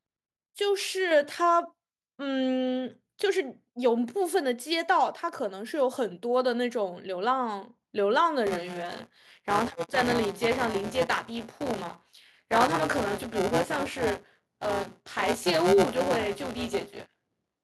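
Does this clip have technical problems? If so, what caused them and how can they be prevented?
Yes. At about 1.11 s the microphone volume steps up by about 5 dB in one jump: the call software decided the mic was too quiet and raised the device input gain. The speech and the background noise get louder together, which is why it sounds like a level change rather than someone speaking up. To prevent it, set the input level sensibly beforehand and turn off automatic mic gain adjustment in the call app.

From 8.46 s to the end there's buffer tearing, a robotic buzz riding on the speech at 172 Hz. That rate fits a 256-sample buffer. The app writing the ring buffer and the hardware reading it have drifted into each other, so roughly a fifth of every buffer plays audio from about 20 ms earlier, with hard joins on both sides. It's only there when there's signal. The fix is to get the write and read positions properly synchronised, or use a larger buffer with safe headroom.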